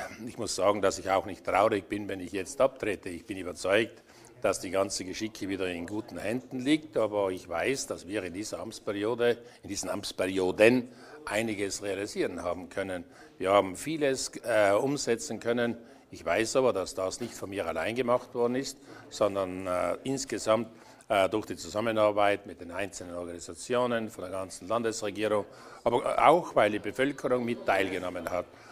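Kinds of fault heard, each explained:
Nothing here stands out as a fault; the audio just carries on as it should, with no glitches or oddities to point to.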